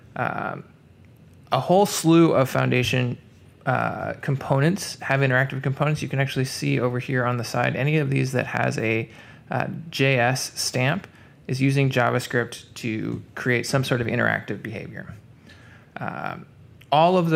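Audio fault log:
No fault is heard in this audio.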